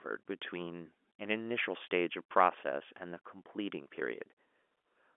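No technical faults can be heard in this speech, which carries the narrow band of ordinary G.711 telephone coding, roughly 250 Hz to 3.4 kHz, as expected for a 64 kbps phone line.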